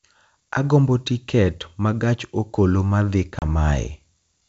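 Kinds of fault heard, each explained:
Packet loss on an ADPCM call: at about 3.39 s, just after "ma gach okoloma dhi", roughly 30 ms of speech, likely a few packets, drops to hard-edged silence, and the decoder's predictor and step size lose sync, so the speech resumes with brief distortion.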